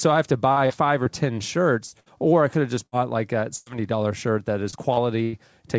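From about 0.52 s to 5.35 s there's repeated packet loss, giving that robotic sound: ten separate dropouts, the longest around 103 ms, each papered over by stretching the last bit of audio. Roughly a tenth of that stretch is patched, so it sounds choppy, all within a band that stops at 8 kHz, which fits a G.722 call codec.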